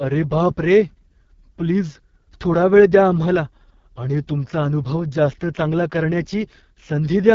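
Throughout the speech, the AMR wideband (HD Voice) codec is audible. Nothing sits above about 7.4 kHz. The damage is heavy: a rough, raspy texture that fits the lowest 6.6 kbit/s mode. The vocal model is starved of bits, and the top band is only shaped noise.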